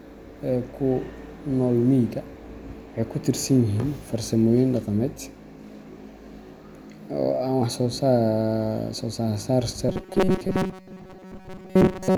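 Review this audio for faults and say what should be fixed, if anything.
From 9.89 s to 12.18 s the speech turns into a rigid, metallic buzz pitched at 188 Hz: robotic sound from repeated short buffers. The likely cause is late-arriving audio, with the playback filling most of the gap by looping a roughly 5 ms fragment while real audio is skipped. A spectrogram would show flat, evenly spaced harmonics at multiples of 188 Hz, and the waveform would show identical cycles repeating every 5.3 ms. Larger jitter buffers or a stable, higher-priority audio thread would keep new audio arriving on time.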